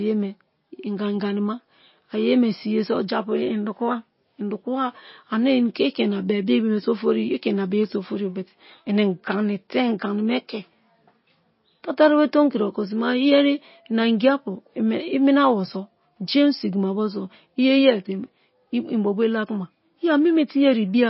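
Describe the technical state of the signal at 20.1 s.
At 20.1 s the speech carries MP3 compression artefacts that run through the whole clip: nothing above 5.6 kHz, with a watery, swirling texture on sibilants that sets it apart from a plain low-pass. This is likely the encoder starving weak frequency lines, which fits a low bitrate near 24 kbps.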